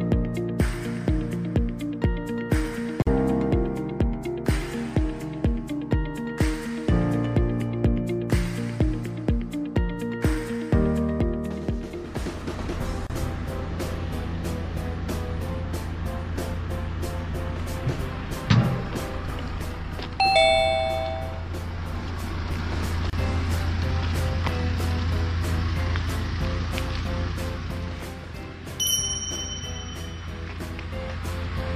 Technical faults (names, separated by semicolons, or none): gap at a join of encoded pieces